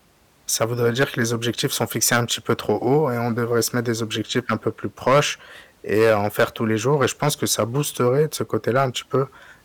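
Hard clipping runs through the whole speech clip: the signal was driven about 11 dB past what the stage could pass, so a small share of samples, around one to two percent, hit the ceiling and were cut flat, adding crackle on the louder peaks.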